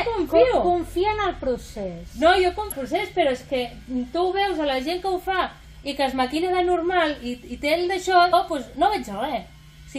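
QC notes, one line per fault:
2.71–2.73 s and 8.33 s: damaged data in a compressed stream. Corrupted bytes make the decoder misread frames and lose sync. It produces a brief chirp or blip at each point while it searches for the next valid frame header, then decoding resumes.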